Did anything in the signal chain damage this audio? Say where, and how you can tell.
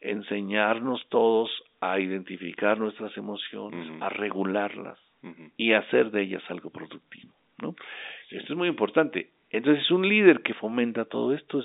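No, nothing in the signal chain damaged this speech.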